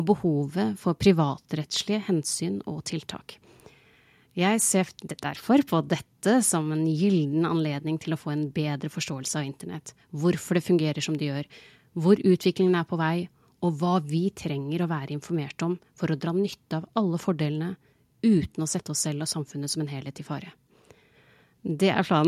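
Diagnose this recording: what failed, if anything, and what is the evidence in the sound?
Nothing in the recording points to a failure at any stage of the chain. The speech continues without any audible event that would call for a diagnosis.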